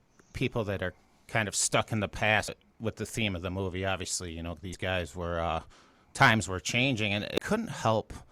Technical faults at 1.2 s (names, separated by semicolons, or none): none